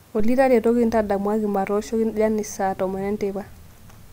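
Speech recording, no technical faults found.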